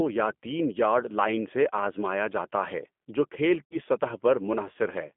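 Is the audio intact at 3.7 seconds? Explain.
No. From 3.65 to 3.78 s the speech smears into a fading buzzy tone or coloured noise: VoIP packet loss concealed by the speech codec, as the decoder stretched its last pitch and filter over about 60 ms of missing audio (consistent with three lost packets), lowering the gain each frame. The G.729 codec also makes it rough and synthetic throughout, squeezed into a 200 Hz to 3.4 kHz band at 8 kbit/s.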